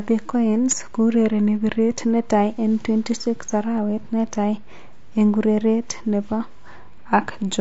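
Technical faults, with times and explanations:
Throughout, low-delay AAC compression: the speech sounds rough and grainy, with noise filling between harmonics and a thin, synthetic top band, likely from AAC-ELD near 32 kbps.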